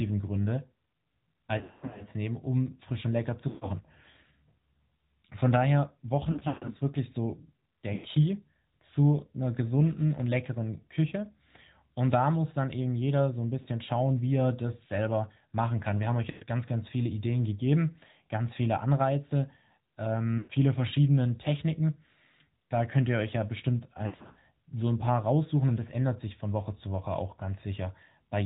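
The AMR narrowband mobile codec shapes the whole speech clip. Nothing above 4 kHz survives. The voice sounds buzzy and synthetic, which fits a 10.2 kbps mode.

Lost AMR speech frames hit at 1.58, 3.48, 6.32, 7.94, 13.62, 16.30, 20.38 and 24.06 s. The second is just after "frisch und lecker zu". At each loss the decoder stretches the last good sound and fades it, so speech warbles, dips or briefly drops out.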